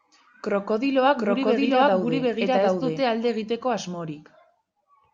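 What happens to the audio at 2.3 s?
At 2.3 s the speech is heard twice at once: a second, equally loud copy trails the original by roughly 0.7 s, clean and full-band, with no fading tail or room sound of its own, so it reads as a stray overlapping track rather than an echo. This doubled audio track runs from 1.17 to 3.01 s, appearing and vanishing abruptly, and is likely caused by the signal being captured a second time through a slower path.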